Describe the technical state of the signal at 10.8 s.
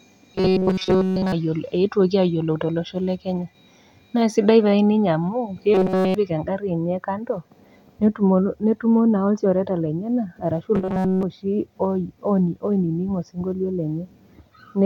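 At 10.8 s the speech becomes a rigid, metallic buzz near 188 Hz, from 10.75 to 11.23 s. This is robotic sound from repeated short buffers, likely caused by audio arriving too seldom, so every moment replays a roughly 5.3 ms fragment while real audio is skipped.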